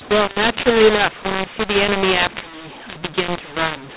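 Speech encoded with the A-law variant of G.711 is being decoded as mu-law for the whole clip, a mu-law and A-law mix-up. Because the two laws map the same 8-bit codes to different amplitudes, every level is scrambled: some samples come out too loud, others too soft, and the quietest ones are pushed well above silence. The result is harsh, gritty distortion, with noise filling the pauses. The band stops at 4 kHz, which fits ordinary telephone sampling.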